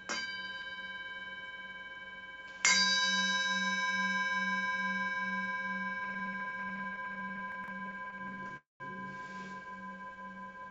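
From about 6.04 to 8.52 s the audio stutters: repeated stalls (stutter), dozens of short dropouts of up to 20 ms each, patched by extending the last sound. That patching covers roughly a sixth of the stretch, so it drags without losing anything. Inside that, from 7.52 to 7.68 s, you get chunks out of order: a 40 ms piece plays three chunks late, giving a jumbled blip. Then there's a call audio freeze from 8.57 to 8.82 s. The sound hangs and fades, with about 160 ms of near-silence, then picks up where it left off, likely because packets were held up and the jitter buffer emptied. Finally, a jitter buffer slow-down runs from 9.91 to 10.70 s. The receiver repeats tiny pitch periods to rebuild its reserve, so things play at about 89% speed at the same pitch, stretched by 93 ms. Underneath it all is a call-codec sound with nothing above 8 kHz, which fits G.722 at 64 kbps.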